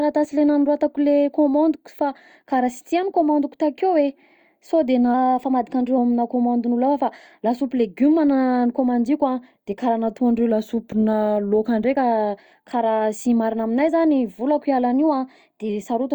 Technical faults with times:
5.14-5.98 drift correction step
10.51-11.85 drift correction step
14.94-15.69 drift correction step

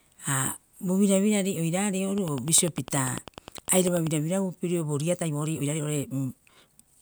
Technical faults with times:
2.18-4.08 train of clicks
5.08-7.01 time-stretched section

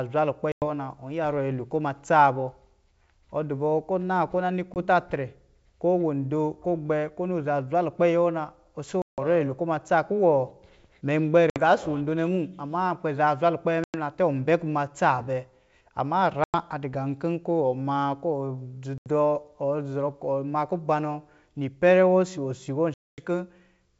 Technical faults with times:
0.52-0.64 packet loss on an ADPCM call
4.74-4.78 packet loss on an ADPCM call
9.02-9.19 packet loss on an ADPCM call
11.50-11.60 packet loss on an ADPCM call
13.84-13.95 packet loss on an ADPCM call
16.44-16.55 packet loss on an ADPCM call
18.98-19.07 packet loss on an ADPCM call
22.94-23.25 packet loss on an ADPCM call

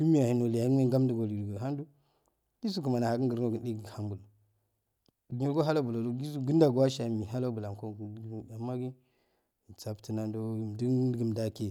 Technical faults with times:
none

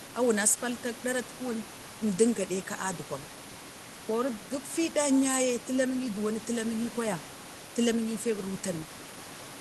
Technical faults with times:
none

